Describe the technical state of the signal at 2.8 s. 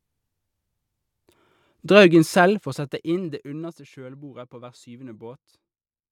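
At 2.8 s the signal is in the middle of a stretch of zipper noise running from 2.42 to 3.90 s, just before "kjølbordet på hver". The speech is being turned down by about 20 dB in unsmoothed 1 dB jumps, roughly ten per second, and each jump leaves a small click. Unlike a smooth fader move, the drop carries an audible ticking, zipping texture riding on the voice.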